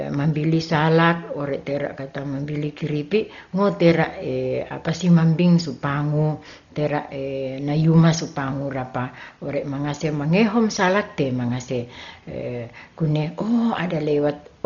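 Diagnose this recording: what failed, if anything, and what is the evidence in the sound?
Codec stage. The speech is dull throughout, with nothing above 6.9 kHz, heavy codec damage and rough, fluttering noise. Likely Dolby Digital compression near 32 kbps, with dither filling lines given no mantissa bits.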